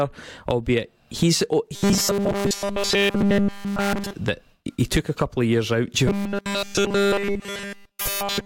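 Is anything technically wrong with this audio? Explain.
Yes. Robotic sound from repeated short buffers occurs at 1.75–4.13 s (after "albeit he's oh", before "that he took a") and from 6.07 s to the end (after "couple of years out"). Essentially all of each stretch is a 5 ms slice looping at 200 Hz, likely from audio arriving too seldom. The result is a rigid metallic buzz, seen as evenly spaced 200 Hz harmonic lines on a spectrogram and an identical repeating waveform cycle.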